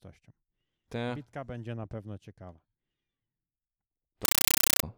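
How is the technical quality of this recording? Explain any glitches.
The speech is clean until one serious glitch near the end. From 4.25 to 4.83 s, the audio turns into very loud, chattering static. This is a compressed stream played as audio. A link passed coded data as plain samples without decoding. That gives 8 ms noise bursts followed by silence, repeating 31.25 times a second, which fits an AC-3 stream.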